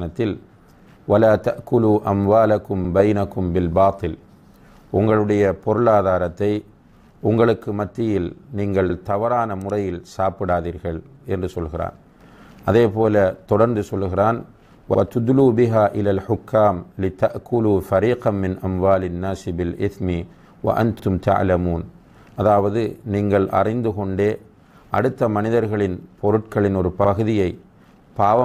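At 2.85 s, 8.90 s, 14.95 s and 21.00 s the audio stutters briefly. These are overlapping chunks: the stream was handled in 6-second blocks, each starting 50 ms before the previous one ended, so that 50 ms sounds twice at every join. Each repeat is heard as a quick click or hiccup, roughly every six seconds. On a waveform the same short stretch appears twice in a row. A spectrogram shows a thin vertical seam with a duplicated slice beside it.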